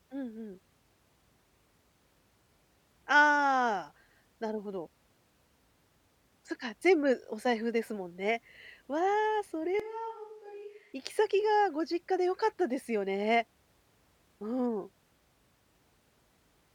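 A switch to a distant microphone occurs in this speech recording from 9.80 to 10.93 s. For just over a second the sound abruptly turns roomy and hollow, loses its low end, drops about 10 dB in level, and brings up background noise sitting roughly 30 dB below the speech, before snapping back. The likely cause is that the close microphone's signal dropped out and a farther pickup, such as a camera microphone, briefly carried the recording.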